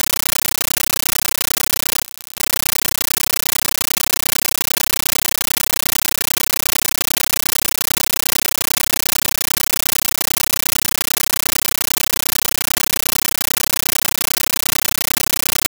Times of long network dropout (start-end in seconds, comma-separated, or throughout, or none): none